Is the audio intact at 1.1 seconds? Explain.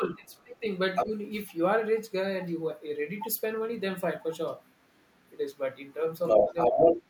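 No. Around 1.05 to 1.12 s the echo canceller likely could not separate the talker from loudspeaker echo while both sides spoke, and turned both down. This is speech suppressed in double talk: the talker's voice briefly dips by a modest amount for under a tenth of a second.

Just before that, from 0.95 to 1.08 s, the canceller likely failed to fully remove the far end's loudspeaker sound from the microphone. This is the other side's voice leaking through: a brief second voice, somewhat louder than the talker, ending right around 1.1 s.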